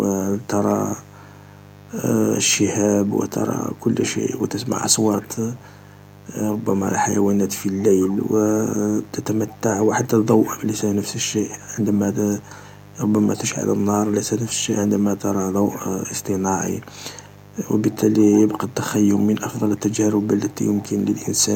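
A steady, raspy mains buzz at 50 Hz runs under the whole recording, well below the speech, from switching spikes injecting harmonics into the signal path.

An echo leak appears from 0.41 to 1.13 s, 3.04 to 5.89 s, 7.22 to 13.45 s, and 14.05 s to the end. A faint copy of the speech trails 143 ms behind, likely from a loudspeaker echo the far-end canceller missed.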